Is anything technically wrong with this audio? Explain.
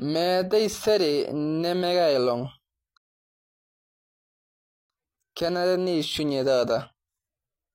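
Yes. At 2.98 s the speech cuts to silence and stays silent until 4.90 s, then picks up exactly where it left off with "kenare neushunye", adding 1.92 s. This is a rebuffering stall: playback drained its downloaded audio and waited for more data.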